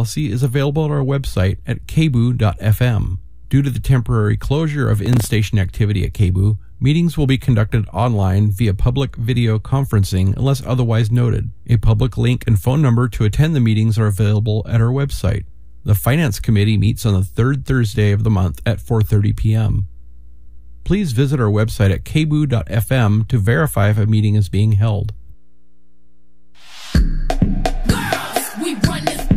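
From 5.06 to 5.31 s the processor missed about seven short buffer deadlines and replayed old audio, causing a brief gritty burst of processor overload crackle.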